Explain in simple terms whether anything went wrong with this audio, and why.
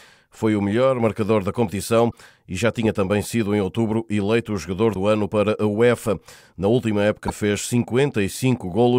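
Brief glitches at 2.08, 4.91 and 7.24 s are damaged data in a compressed stream: corrupted bytes threw the decoder off until it found its place again.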